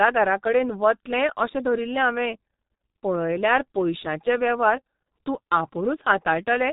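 From start to finish the speech carries heavy G.723.1 codec damage: nothing above 3.8 kHz, muffled and hoarse, smeared consonants, which fits a rate around 6 kbit/s.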